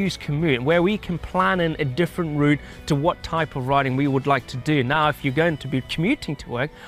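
No technical faults are audible.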